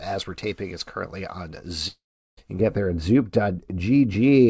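A speech clip carrying two faults. From 1.88 to 2.39 s the sound breaks off. The last sound is stretched into a buzzy continuation that fades, and about 0.38 s of near-silence follows before speech resumes without the half second that went missing. This is likely a long network dropout with the receiver concealing the loss. On a spectrogram it shows as a smeared, repeating band fading into an almost empty gap. On the waveform the envelope decays to a flat line. From 2.59 s to the end, de-emphasis applied wrongly gives the speech a dull, muffled quality. A treble cut with no matching pre-emphasis tilts the response smoothly downward, about 11 dB lower at 10 kHz than at 1 kHz. On a spectrogram the upper harmonics and fricatives in that section look visibly fainter than before it. Throughout, the call path leaves nothing above 8 kHz, which fits a wideband call codec such as G.722.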